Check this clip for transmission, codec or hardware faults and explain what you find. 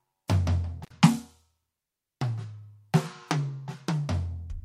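One hardware fault appears in this music clip: an intermittent contact between 0.83 and 0.91 s. A loose connection opens for about 60 ms, so the music drops to faint hiss with crackle at each edge. The waveform shows a near-flat gap bounded by spikes; the spectrogram shows broadband vertical streaks at both ends.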